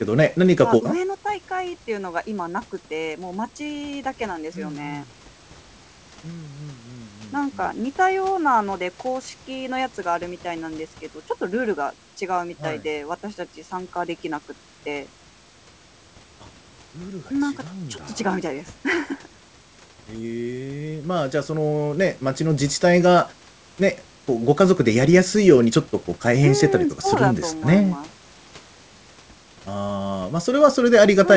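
The speech has no technical faults: it has been through a call path whose wideband codec, consistent with G.722, leaves nothing above 8 kHz, and the room's background noise sits about 36 dB below the speech.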